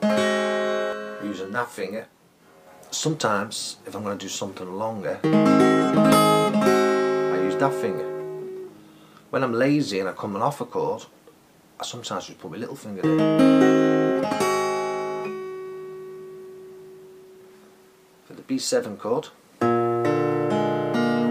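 From about 0.93 to 2.67 s there's channel delay with comb filtering. One side runs roughly 20 ms late, so the mono sum cancels at evenly spaced notches starting very low. It sounds rough and slightly doubled.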